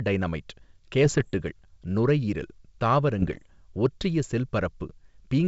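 A speech clip carried over a G.722 wideband link, which sounds clean up to about 7 kHz at what points to the full 64 kbit/s mode. The trouble is bit errors on an ADPCM link: rough, poppy bursts from 1.06 to 1.29 s and again from 3.19 to 3.47 s. Flipped bits, at a rate well under one percent, knock the decoder's step size and predictor off track, so each hit smears into a few milliseconds of grit and brief level jumps.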